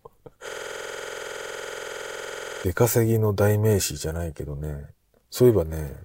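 From 0.49 to 2.64 s the speech freezes in a system hang loop: the system stalled while the sound hardware kept replaying one 46 ms ring buffer, likely 2048 samples. Identical repeats at 21.5 Hz give a rigid stutter, unlike dropouts' uneven gaps.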